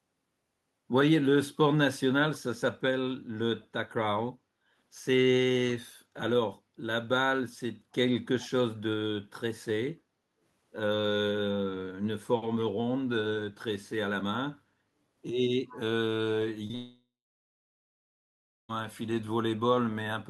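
At 8.40 to 8.49 s a faint, delayed copy of the speech appears, sitting about 25 dB below the direct sound and trailing it by 270 ms. This is most likely an echo leak: the far end was playing the call over a loudspeaker, and its echo canceller let a residue of that playback back into the microphone. On a spectrogram it shows as a weak, smeared repeat of the preceding harmonic pattern, shifted right by about a quarter second. In the waveform it is a low-amplitude tail hanging after the main envelope.

From 10.01 to 10.40 s the background is gated by the echo canceller. While loudspeaker playback was active, the canceller pulled the microphone gain down, and the room tone dips by up to about 8 dB for roughly 400 ms before recovering. The waveform's noise floor narrows visibly over that span. On a spectrogram the broadband background darkens into a short vertical band, then brightens again when the suppression releases.

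A second echo leak comes at 15.69 to 15.79 s. It has the same 270 ms delay but is louder, at about 20 dB below the speech, so the ghosted repeat stands out a little more against the direct signal. It is again a faint time-shifted copy on the spectrogram, with a low-level tail in the waveform.

Two short concealed packet losses follow back to back, at 16.67 to 16.71 s and 16.71 to 16.75 s. Each covers about 20 ms of audio that arrived too late for the decoder. The receiver filled each gap by extending the last sound, which gives a brief smear or wobble. On a spectrogram the harmonics freeze into flat, slightly blurred stripes instead of following their natural movement. The waveform shows a short stretch of overly regular repetition.

These run straight into a long network dropout from 16.75 to 18.71 s, likely caused by a stall in packet arrival that lost about 1.9 s of audio. Concealment first continues the last sound as a decaying buzz or hiss. 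Then about 1.6 s of near-silence remains before the audio resumes, with the missing stretch simply gone. The waveform flattens almost to zero across that gap, and the spectrogram shows a dark block. Throughout the clip the Opus coding keeps energy below about 12 kHz, visible as a clean upper cutoff.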